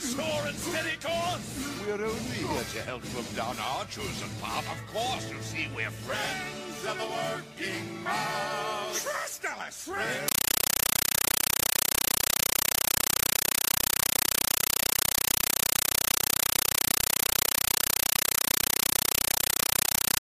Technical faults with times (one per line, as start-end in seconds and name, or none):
10.28-20.21 compressed stream played as audio